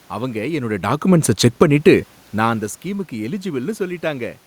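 From 1.46 to 1.85 s, automatic gain falling pulls the level down by about 3 dB. The gain control judged the input too loud, or its background noise too strong, and eased its gain back over roughly 0.4 s. The drop ends just before "நான் அந்த ஸ்கீமுக்கு". The speech sinks, and the room noise sinks with it. That shared drop separates it from the talker's movements near 0.5 s and 2.0 s, where only the speech level shifts.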